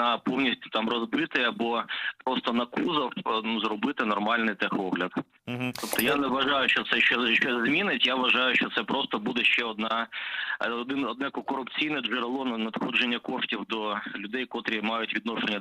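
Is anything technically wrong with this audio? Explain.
No, nothing is technically wrong with this audio.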